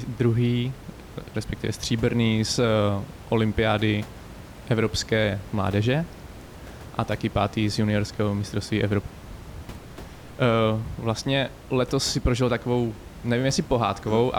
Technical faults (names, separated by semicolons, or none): none